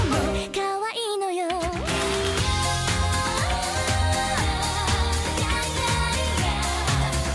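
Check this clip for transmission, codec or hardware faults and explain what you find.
I find no faults to report in this clip.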